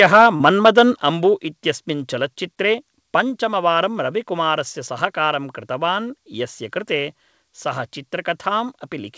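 From the very start to 0.83 s, the loudest peaks sound flattened and carry a harsh, crackly edge, classic microphone overload. The input gain was likely set about 6 dB too hot, so a small share of the waveform tops got sheared off at the converter before "अम्बु इत्यस्मिन् चलच्चित्रे".

Inside that stretch, from 0.36 to 0.41 s, there's a quick smeary wobble where about 40 ms of audio went missing. That's short concealed packet loss: the decoder stretched the preceding sound to paper over roughly 36 ms, then crossfaded back, so a brief sound there could be lost.

Around 1.02 s the whole level, background included, drops abruptly by about 5 dB just ahead of "अम्बु इत्यस्मिन् चलच्चित्रे". That's the microphone volume stepped down, likely the call software reacting to the clipping by pulling the input gain in one go. All of it arrives through a G.722 call path, with nothing above 8 kHz.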